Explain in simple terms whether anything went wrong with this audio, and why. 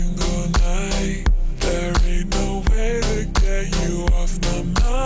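Something did go wrong, and it lasts through the whole clip. This is a wrong sample rate problem. The sound plays at about two-thirds of its proper speed, so everything drags. The pitch also drops by about 7 semitones, so it sounds deep and heavy. Speed and pitch fall together because the audio was played back slower than it was made. That fits a recording made at 24 kHz being played at 16 kHz, with no conversion in between.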